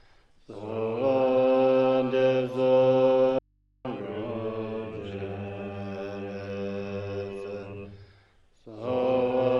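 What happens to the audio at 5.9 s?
Nothing goes wrong at 5.9 s; the audio carries straight through that moment with no audible fault.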